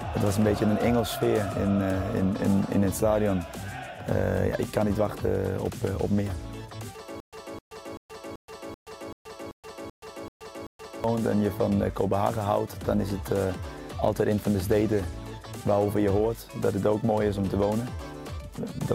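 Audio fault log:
7.20–11.04 s, stutter with silent gaps: playback likely stalled and kept retrying, replaying its last fragment; a 259 ms burst repeats ten times, each followed by 126 ms of digital silence, every 385 ms, and the audio meant for that stretch is lost.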